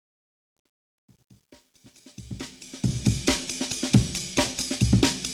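From 0.0 to 3.20 s the fade-in carries truncation distortion: the gain stage keeps only about 10 bits without dither, so low levels collapse into coarse steps. Worst through 2.41 s, the rising sound is gritty.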